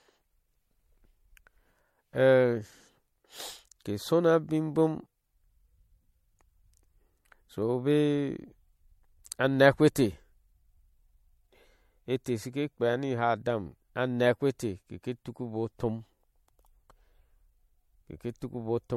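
Throughout, the speech sounds swirly and hollow, attacks blur, and nothing reaches above 16.6 kHz. Likely generation loss, fitting about three MP3 passes near 64 kbit/s.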